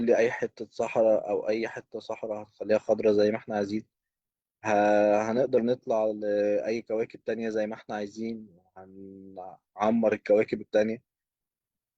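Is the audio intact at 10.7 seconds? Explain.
Yes, the audio is intact at 10.7 seconds, with no audible fault at that moment.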